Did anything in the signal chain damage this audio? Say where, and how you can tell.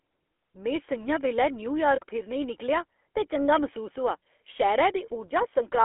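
Yes. At the codec stage, the GSM full-rate codec, consistent with 13 kbps, squeezes the speech into a 300 Hz to 3.4 kHz band with buzzy, gravelly pulse-excited roughness throughout.

At the network stage, lost GSM frames at 0.36–0.38 s, just before "में स'ञां बैल्लै", and 1.96–2.00 s, right after it, are concealed by repeating the last good frame, which leaves brief metallic rings.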